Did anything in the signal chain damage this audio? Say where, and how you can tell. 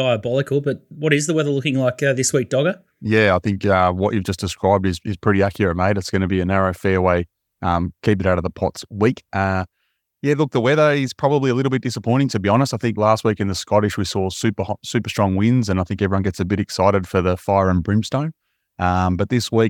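No, nothing in the signal chain damaged this speech recording, and no stage leaves any mark on it. The whole clip holds together without a break or a change that would point to trouble anywhere along the path.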